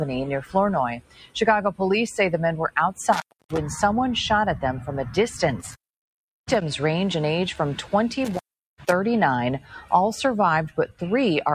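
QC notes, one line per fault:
Throughout: noise suppressor applied to music or sounds. A speech-oriented noise suppressor stays active across the whole clip and keeps treating sustained content, ambience and reverb tails as noise. Its gain swings by roughly 10 dB as it decides moment to moment what to keep. Onsets pass because they look like wanted signal, but held material and decays are pulled down. The result is a pumping, fluttering level and a thinned-out body to the sound.
0.96–1.36 s, 9.6–9.91 s and 10.69–11.01 s: sound cut by the noise suppressor. In each of these spans the suppressor misclassifies the material as noise and attenuates it harder than its surroundings. The deepest drops are about 20 dB in the first, about 11 dB in the second and about 17 dB in the third. Sustained or fading parts sink audibly or have their decay chopped short, while any sharp transients inside the spans largely survive.
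8.25–8.92 s: intermittent contact. A loose plug or cable briefly loses connection, and the signal drops out for about 389 ms within this window. Crackle marks the moments the contact breaks and remakes, because the circuit opens and closes unevenly rather than cleanly. While the line is open, faint hiss remains where the program should be. It is a hard, abrupt interruption rather than a smooth fade.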